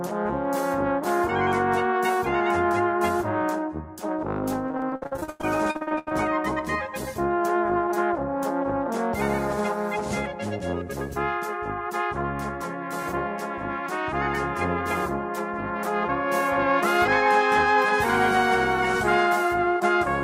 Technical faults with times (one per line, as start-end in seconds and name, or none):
4.67-6.13 repeated packet loss (robotic sound)